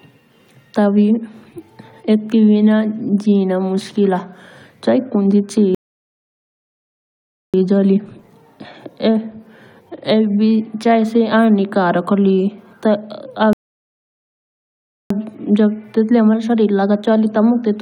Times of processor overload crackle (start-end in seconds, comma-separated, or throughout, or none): none